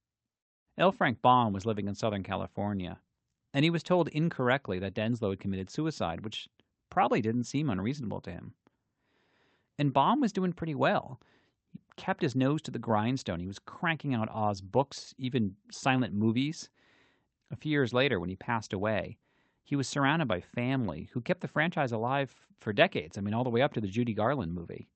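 No technical faults can be heard in this recording.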